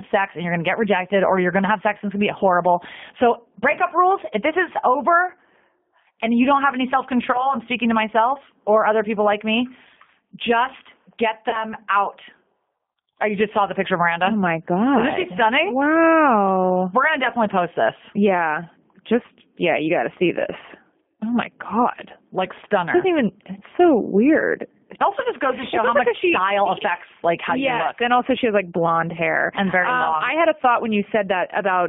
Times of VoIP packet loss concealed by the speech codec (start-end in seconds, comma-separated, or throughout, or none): 7.32-7.55, 11.49-11.62